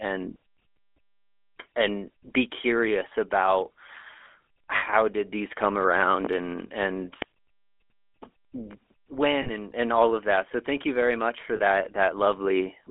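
The speech has passed through the GSM full-rate codec. It describes the vocal tract with a short filter and drives that filter with a sparse train of regular pulses, which fits a 13 kbps channel. The line is limited to roughly 250 Hz to 3.4 kHz, so the audio is thin and boxy. The coarse excitation gives it a plainly audible buzzy, gravelly grain throughout. At 4.76–4.83 s, 9.42–9.50 s and 11.56–11.62 s there are lost GSM frames. The decoder had no valid data for these spans and repeated the last good frame's settings. The first gap lasts 60 ms, which fits three lost frames. The other two last 40 ms each, which fits two lost frames. Because none of the gaps is long enough to fade into silence, each one is heard as a short rough, metallic ring that holds the sound in place before normal audio returns. From 6.25 to 6.28 s there is one loud pop, about 15 dB above the speech. It was likely caused by a sudden voltage step or pulse entering the chain, such as from a switch, a connector or a driver glitch, which the following circuitry shaped into a brief transient. 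It sounds as a single sharp crack laid over the speech, which carries on underneath without interruption.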